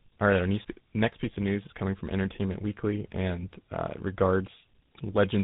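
Tandem speech coding runs throughout: the speech passed through CVSD, G.711 A-law and then GSM full rate, with each speech coder re-encoding the previous one's output. The result is rough, muffled and warbly, with nothing above 3.8 kHz.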